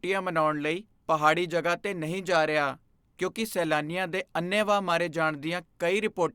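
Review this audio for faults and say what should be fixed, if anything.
Nothing here needs fixing; the speech is intact throughout, with no audible defects.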